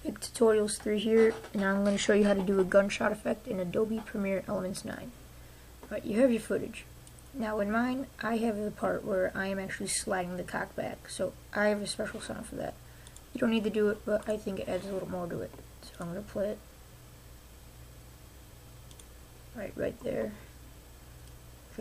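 No technical faults turn up anywhere in this audio, so there is nothing to set out in time order.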